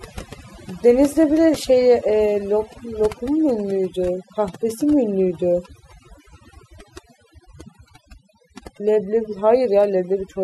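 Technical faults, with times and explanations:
throughout, overdone noise removal: the noise reduction on this speech was pushed far too hard, so any frequency band sitting close to the estimated noise level is pulled down sharply or shut off entirely. The background drops and breaks up into small twinkling specks where isolated bands briefly pop back above the threshold, and the quieter components of the voice are stripped along with the noise.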